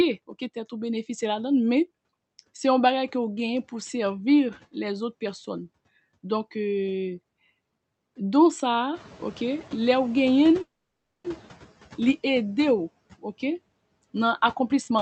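Speech over a call link, band-limited to around 8 kHz, which fits an Opus stream at roughly 48 kbps. At roughly 9 s the room noise jumps by about 13 dB and settles about 21 dB under the speech. That's just the room, but it exposes the noise suppressor catching up. From 8.94 s to 11.57 s the louder hiss comes through with little reduction at first, then sinks by about 8 dB over roughly two seconds as the suppressor's noise estimate adapts to the new level. In the middle of that, from 10.61 s to 11.26 s, there's a call audio freeze. The last bit of sound is stretched into a short fading buzz or hiss, and then there's about 580 ms of silence before the speech resumes exactly where it left off. That adds about 630 ms of gap and loses nothing, which points to packets that were likely held up in transit until the jitter buffer ran dry. Some of the extra delay gets paid back from 14.45 s to 14.98 s by a jitter buffer speed-up. 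The receiver trims short pitch-period chunks over and over, about a tenth of a second in total, so the speech runs at roughly 117% speed with the pitch unchanged and sounds noticeably hurried right at the end.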